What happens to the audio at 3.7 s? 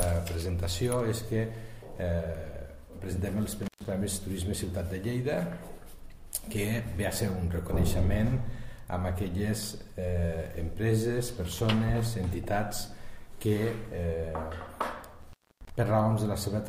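An intermittent contact, a loose cable or plug briefly opening, cuts the signal from 3.63 to 3.85 s, with an open gap of about 126 ms, crackle at the edges and faint hiss.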